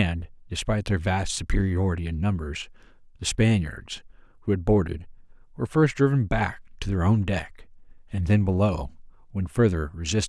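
No audible technical faults.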